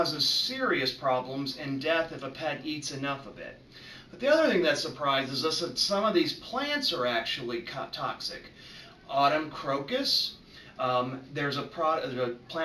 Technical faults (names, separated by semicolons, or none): none